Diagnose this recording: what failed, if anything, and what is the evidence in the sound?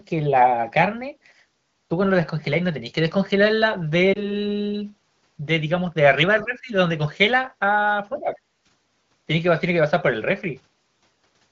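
At 4.13 s the speech dips and warbles briefly, then recovers by 4.31 s. This is a lost AMR speech frame at the network stage. The sound points to a single lost frame of about 20 ms. A radio error failed the frame's checksum. The AMR-WB decoder, running at 15.85 kbit/s, filled the gap with the last good pitch and vocal tract settings at reduced gain. The remaining fraction of a second is the decoder settling back to full strength.

Two dips fall in the call processing stage, from 6.42 to 6.72 s and from 8.08 to 8.37 s. Each lasts roughly 0.3 s. The first drops the level by about 15 dB and the second by about 10 dB. The likely cause is speech suppressed in double talk. When both sides spoke at once, the echo canceller could not tell this talker from the loudspeaker echo, so it turned the talker down.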